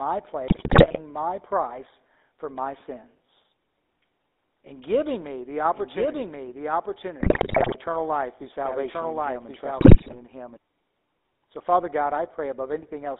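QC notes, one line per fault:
Throughout: GSM full-rate codec. The speech has a plainly audible buzzy, gravelly roughness. The band runs only from about 250 Hz to 3.7 kHz, so it sounds thin and boxy. This codec models the vocal tract and excites it with sparse, evenly spaced pulses. Much of the fine detail between those pulses is thrown away, and that leaves the grainy texture. The sound fits a 13 kbps full-rate coder.
0.48–1.00 s, 7.20–7.75 s, 9.78–10.16 s: GSM bit errors. In each stretch the speech breaks into squawks, pops and gargling. The level jumps and the tone twists from frame to frame. Corrupted bits are reaching the decoder. When the filter, pitch or gain values are wrong, it rebuilds a distorted spectrum or a sudden loud burst. The damage points to a bit error rate of several percent, heaviest in the middle burst.
5.73–10.57 s: doubled audio track. A second copy of the speech plays about a second behind the first, at about the same level. 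It is full-band and dry, with no decay or room colour. It starts and stops abruptly at the edges of this span. The two overlapping copies smear the speech. The likely cause is the same audio being captured again through a slower path, or an edit leaving two copies out of step.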